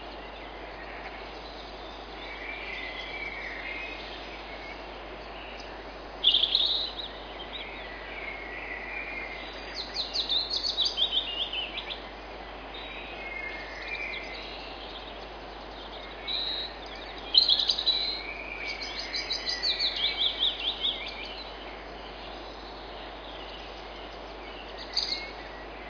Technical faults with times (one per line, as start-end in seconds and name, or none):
none